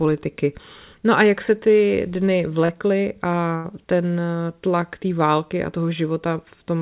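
A speech recording carried over a narrowband call path, with the band stopping at 4 kHz, which fits G.711 A-law at 64 kbps, shows two packet-loss faults. The first is a short concealed packet loss between 2.66 and 2.75 s, just after "jak se ty dny". About 20 ms of audio failed to reach the decoder in time, and the receiver filled 26 ms by extending the preceding sound before blending back into the real signal, trimming 6 ms in the merge. The result is a brief smear or wobble across the join. The second is a burst of packet loss from 3.56 to 3.66 s, immediately before "ten tlak té války". Roughly 80 ms of consecutive audio was lost, and concealment synthesised the full 80 ms by continuing the last sound while attenuating it over the gap. This produces a held buzz or fading hiss, after which the speech resumes further on with that stretch absent.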